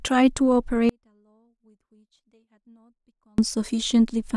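Speech clip with an audio dropout to a faint residue from 0.89 to 3.38 s: for about 2.5 s the speech cuts abruptly to a whisper roughly 40 dB down, likely a broken feed into a still-live path. The waveform collapses to a near-flat band, and the spectrogram shows a sharp-edged pale gap.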